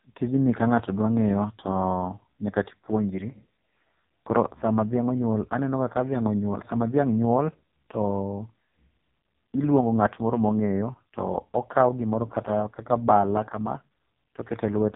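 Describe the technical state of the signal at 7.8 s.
At 7.8 s the speech is still carrying the AMR narrowband mobile codec, which runs through the whole clip. Nothing above 3.8 kHz survives, so the voice sounds boxed in and telephone-thin. The codec rebuilds speech from a vocal tract model fed by sparse pulses in each short frame. Here very few bits describe those pulses. The result is heavy damage: a buzzy, synthetic tone that fits the codec's lowest mode, around 4.75 kbps.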